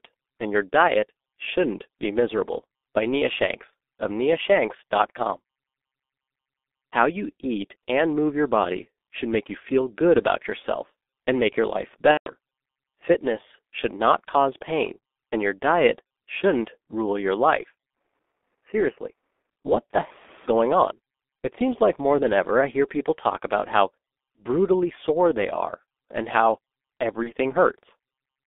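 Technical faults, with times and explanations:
Throughout, G.723.1 codec: the speech sits in a narrow telephone band of roughly 250 Hz to 3.6 kHz at about 6.3 kbit/s, and the damage is heavy. Its 30 ms frames and sluggish voice model leave everything muffled and hoarse, with smeared consonants.
12.11–12.31 s and 27.23 s, VoIP packet loss concealed by the speech codec: right after "and make your life" about 150 ms went missing, and at 27.23 s a single 30 ms frame. The decoder kept extrapolating its last pitch and filter while fading the gain, so you hear a stretched, fading smear, and the voice stays weak for a moment after.
17.97–19.50 s, input switched to a poorer device: after "shouldn't rule your life" the sound turns duller, with nothing above 3 kHz, drops by about 5 dB and picks up a faint new noise floor. No gap at the switch. It clears again before "what the heck is", likely a jump to another mic or a headset call profile.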